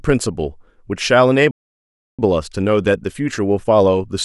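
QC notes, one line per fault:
1.51–2.19 s, playback stall: the player most likely ran short of buffered data or had its output thread blocked, so nothing reached the output for 675 ms. The speech cuts off abruptly in mid-flow, and a dead gap follows before the sound resumes. No fade or noise masks the gap. Because the break falls mid-stream rather than at a natural pause, it is heard as a hitch in delivery rather than as part of the recording.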